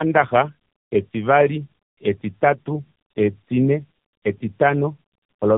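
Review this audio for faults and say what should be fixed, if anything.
Tandem speech coding runs throughout: two low-rate speech coders in sequence, with nothing above 3.8 kHz. Layered roughness and warble beyond any single codec's artefacts set it apart from one narrowband coder. Prevent it by passing the coded bitstream end to end without decoding and re-encoding at link boundaries.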